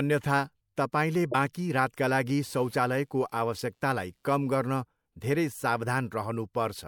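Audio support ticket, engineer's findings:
Damaged data in compressed stream, 1.31 to 1.35 s, just before "बाँकी रातका लागि". Brief glitch. Corrupted bytes in the encoded stream: decoder misreads frames, loses sync, resumes at next valid header.

Computer activity noise, 2.45 to 4.76 s, starting after "तपाईले बाँकी रातका लागि". Faint buzz pulsing near 100 Hz, roughly 40 dB below speech, independent of the talker. Processor or graphics load shifting the shared ground into the audio circuit.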